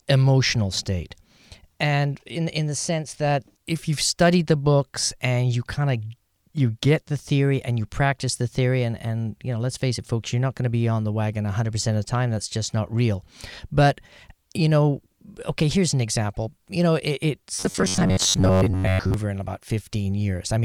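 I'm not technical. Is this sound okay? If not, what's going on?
No. From 17.55 to 19.14 s, between "example you know it" and "in about", the speech becomes a robotic sound from repeated short buffers, a stiff metallic buzz near 94 Hz. This is likely caused by audio arriving too late, so the player keeps replaying about the last 11 ms. Unlike a dropout, it never goes silent.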